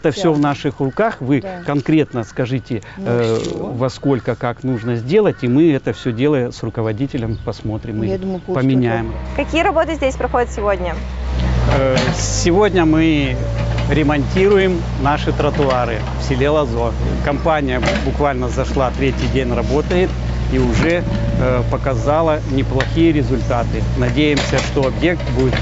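No technical fault can be heard anywhere in the audio, and the signal holds steady throughout with nothing in it that points to a problem in capture, processing or playback.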